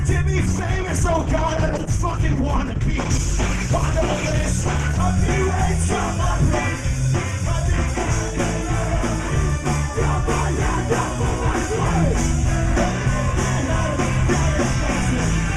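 From 0.44 to 5.07 s there's a call bitrate drop: the encoder gets starved, the sound goes coarse and dull, fitting a fall from 48 to 12 kbps, then clears.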